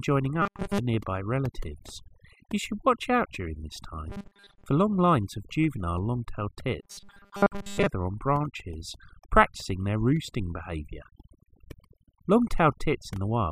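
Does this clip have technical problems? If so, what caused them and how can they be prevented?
Yes. Overdone noise removal runs through the whole speech clip. The background drops and breaks up into twinkling specks. This happens because individual frequency bands are pushed far down whenever they come close to the estimated noise floor, and the quieter parts of the voice are stripped away along with them. To prevent it, use a gentler reduction setting and listen for these artefacts before committing.

Robotic sound from repeated short buffers occurs at 0.42–0.78 s (just before "nearby relatives"), at 4.10–4.67 s (between "watch out during this" and "long lines of juvenile"), and at 6.83–7.86 s (just before "on branches practicing their"). The voice becomes a rigid, metallic buzz at 200 Hz. The likely cause is audio arriving too slowly, so the software repeats a stretch of about 5 ms to fill the gap, and most of the real audio is skipped. 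To prevent it, give the audio stream enough buffering and processing headroom that new data always arrives in time.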